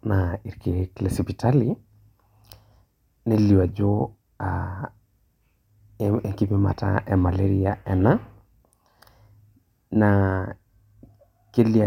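A speech recording with no audible technical faults.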